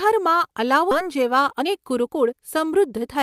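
At 0.91 to 0.93 s a skip ahead occurs: roughly 0.7 s of speech was dropped while later audio waited, so playback jumps forward with no gap. From 1.02 to 3.09 s a jitter buffer speed-up trims short pitch-period pieces, roughly 300 ms in all, so the speech runs at 113% speed, hurried but unchanged in pitch.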